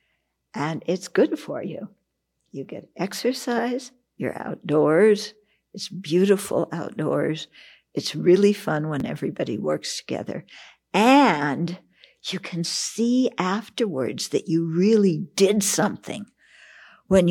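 At 9.00 s, between "outdoors it's really fun" and "everybody works together", a repeated buffer occurs. Fresh audio missed its deadline, so the device replayed its previous block once, a repeat of about 10.7 ms that fits a 512-sample buffer. Because the block is so short, it sounds like a click or brief buzz rather than a stutter. On the waveform, one short stretch appears twice with a sharp break at the join. A spectrogram shows a thin vertical broadband line at that point.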